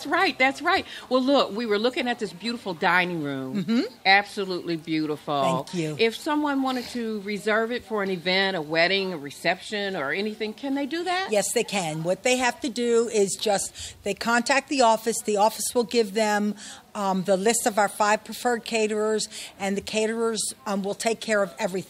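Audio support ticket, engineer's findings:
No audible faults found on review; nothing to escalate.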